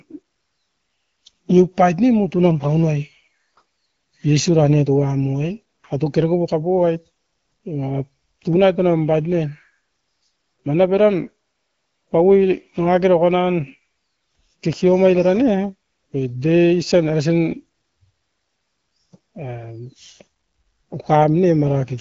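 No technical faults can be heard in the speech, which comes through the AMR wideband (HD Voice) codec at 12.65 kbit/s with only light coding damage and nothing above 7.2 kHz.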